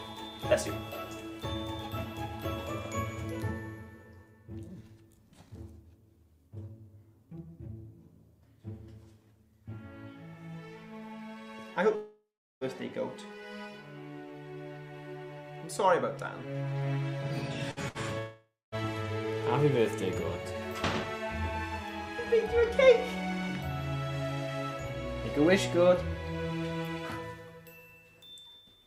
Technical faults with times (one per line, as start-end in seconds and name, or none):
11.95-12.64 long network dropout
17.71-17.98 burst of packet loss
18.19-18.75 long network dropout